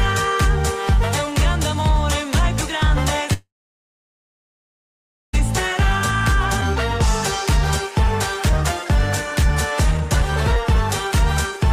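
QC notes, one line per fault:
3.33–5.35 s, call audio freeze: the sound stalls for about 2 s, a brief fading tail then about 1.85 s of silence, and resumes exactly where it stopped with nothing lost. Likely the jitter buffer ran dry while packets were delayed, unlike a skip, which removes audio.
6.61–6.63 s, skip ahead: playback jumps forward with almost no gap, dropping roughly 0.7 s of audio and butting the two sides together. Unlike a freeze, there is no pause. Material simply vanishes, as when buffered audio is discarded.
9.43–11.11 s, jitter buffer speed-up: the audio runs about 10% fast at unchanged pitch, sounding hurried, as the receiver trims short pitch-period slices, roughly 0.2 s in total, to shrink a swollen buffer. Unlike a skip, the loss is spread out rather than one jump.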